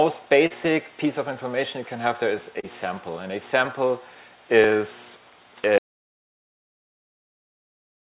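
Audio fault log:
0.47–0.53 s and 2.60–2.66 s, short concealed packet loss. About 30 ms went missing each time. The receiver extended the preceding sound, leaving a brief smear or wobble.
5.78 s to the end, audio dropout to silence. The sound cuts off into silence with no room tone. The input was lost, likely through a disconnected device or failed link.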